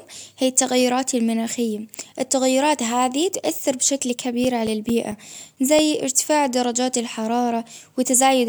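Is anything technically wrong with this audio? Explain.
Yes. From 3.77 to 6.01 s the speech carries CD scratch ticks, eleven of them, about five per second. A scratch corrupts more data than error correction can repair on each disc revolution. The player patches the gap, leaving ticks or brief dropouts, the longest only a few milliseconds.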